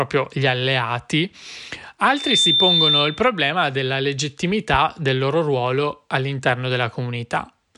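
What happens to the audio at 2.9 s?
At 2.9 s a loudspeaker feedback squeal sounds over the speech, running 2.10 to 3.29 s before "della legittimità del loro". The microphone is picking up its own loudspeaker, and the loop gain exceeds one at 3.6 kHz. That tone swells over about a third of a second to roughly 5 dB above the speech. A spectrogram shows one bright horizontal line at 3.6 kHz, and the waveform's envelope swells.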